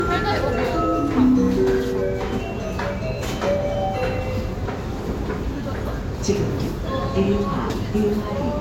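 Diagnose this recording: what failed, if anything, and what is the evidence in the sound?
The codec stage is where it went wrong: this is low-bitrate audio saved at a high bitrate. Everything stops dead above about 16.6 kHz across the whole recording, with the first encode's artefacts still present. The file likely began as a low-rate Vorbis encode before a generous MP3 pass that couldn't restore anything.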